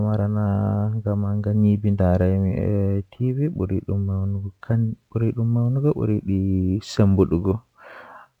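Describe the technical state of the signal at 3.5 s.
At 3.5 s there's sample clock jitter, present right through the clip: a wobbly converter clock mistimes samples by a few microseconds, adding faint hiss on louder, brighter speech.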